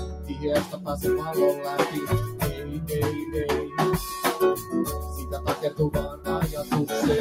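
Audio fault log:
Throughout: noise suppressor applied to music or sounds. The level pumps and breathes, with sustained parts and decaying tails sinking while sharp onsets pass intact, swinging by roughly 10 dB. A speech-tuned suppressor is treating steady tonal content and ambience as noise and pulling it down.
0.05–0.43 s, 0.65–0.88 s, 2.54–2.69 s, 6.11–6.27 s: sound cut by the noise suppressor. Each passage dips and thins, by about 5, 7, 5 and 9 dB, the deepest at 6.11 s. The suppressor judged these steady or fading stretches to be noise and clamped them harder than their surroundings.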